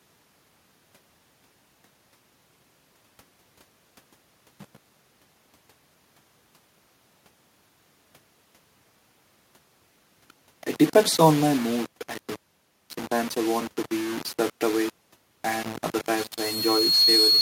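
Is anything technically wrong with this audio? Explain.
Yes, there are three technical faults in this speech clip.

Low bit depth without dither runs through the whole clip. A grainy, rasping distortion rides on the speech and changes with it, sitting only around 20 dB below the voice. The likely cause is samples rounded to very few levels, which fits something like a 5-bit word, with no dither to break up the error. Because the error tracks the signal, quiet syllables and decays turn gritty or sputter instead of fading smoothly.

Automatic gain falling occurs from 11.18 to 12.04 s. Over that span the level sinks by about 4 dB, and the room background drops with it. This happens because a gain control judged the input too hot or its background too strong and pulled its gain down gradually rather than in a single step. You hear a slow, even dip in loudness in which voice and ambience move together. 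A talker changing distance would not lower the background in this way.

Loudspeaker feedback squeal starts at 16.16 s and lasts to the end of the clip. A pure tone at 4.3 kHz swells over roughly a second until it sits around 5 dB above the speech. The microphone is picking up a loudspeaker it feeds, and at that one frequency the loop gain exceeds unity. The tone therefore keeps reinforcing itself, growing into a piercing whistle.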